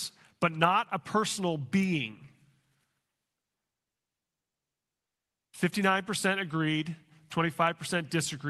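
Nothing stood out on listening to this speech recording.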